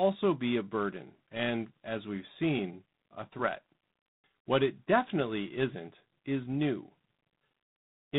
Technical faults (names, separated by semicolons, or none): G.726 ADPCM